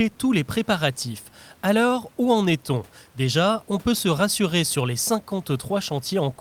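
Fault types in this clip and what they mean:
No faults in this clip.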